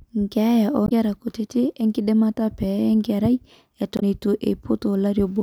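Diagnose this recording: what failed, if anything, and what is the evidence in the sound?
Damaged data in the compressed stream, at 0.85 to 0.92 s and again at 3.96 to 4.03 s, breaks into the speech as two brief glitches of roughly 70 ms each. Corrupted bytes in the codec stream make the decoder misread those frames and lose sync until it finds a valid frame header again.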